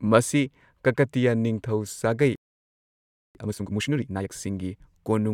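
Right after "ꯀꯀꯇꯤꯌꯥ ꯅꯤꯡꯊꯧ ꯁꯥꯒꯩ", at 2.35 s, the speech cuts out in mid-flow and the output stays silent until 3.35 s, a gap of just under a second. This is a playback stall, most likely the player running dry of data or its thread being held up. A brief dropout or packet loss would leave only a tiny hole. Here the silence is long, clean and total, and the speech resumes rather than having been skipped past.

From 3.35 s to 4.33 s the player works off its backlog with time-compressed catch-up. It snips out small slices of the signal and cross-fades the remainder, running the speech at about twice normal speed. The pitch stays where it was, which is what separates this from simply playing the audio fast, where everything would rise in pitch. What you hear is hurried, crowded syllables.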